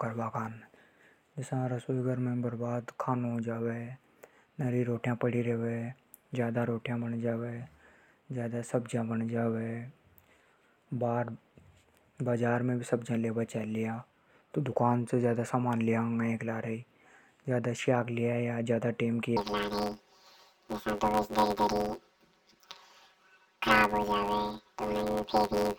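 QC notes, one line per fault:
19.37–25.79 s, planar audio read as interleaved: from 19.37 s to the end, stereo stored as separate left-then-right blocks is read as alternating pairs. Each roughly 10.67 ms block, fitting a 512-sample buffer, plays twice at double speed, leaving a robotic buzz near 94 Hz without an octave shift.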